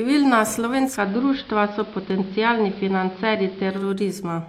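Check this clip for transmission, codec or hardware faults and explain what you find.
One transmission fault is present. From 0.85 s to 3.89 s the speech turns dull and slightly hissy: a faint hiss sits well below the speech, and the level shifts by about 1 dB. This is digital radio blending to analogue. The receiver lost its digital stream and cross-faded over about 0.2 s to the station's AM broadcast, whose narrow bandwidth and noise account for the sound, then blended back.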